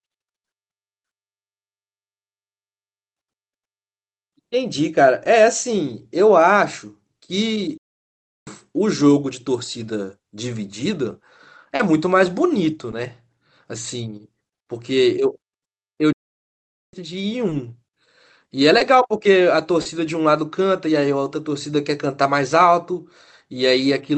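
Speech with brief smears and wobbles at 5.24 s, 11.75–11.80 s, 12.91–12.93 s, 17.49–17.52 s, 18.78–18.81 s and 19.81–19.86 s is short concealed packet loss: 10 to 40 ms of audio arrived too late, so the decoder extended the preceding sound and then blended back into the real signal. The speech also stops dead from 7.77 to 8.47 s and from 16.13 to 16.93 s, silences of about 0.7 s and 0.8 s. These are playback stalls, likely caused by the player running short of data or its thread being blocked before output resumed. All of this is heard through an Opus call path limited to about 8 kHz of bandwidth.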